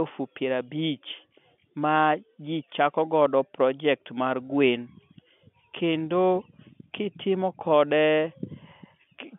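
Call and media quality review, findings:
Nothing to flag on this one: the speech comes through as ordinary G.711 telephone audio in its usual 150 Hz to 3.4 kHz band, with no faults heard anywhere in the clip.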